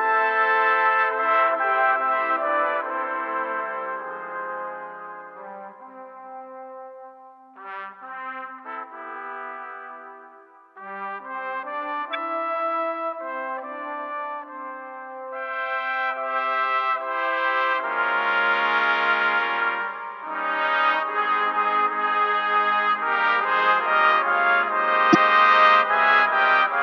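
Corrupt frames decoded appear at 8.58–8.60 s, 12.13–12.15 s and 25.13–25.15 s. Damaged compressed data was played anyway, putting energy at wrong frequencies for a frame or two. Each is a short chirp, squeak, blip or burst of noise: the first faint, the second louder, the last loudest.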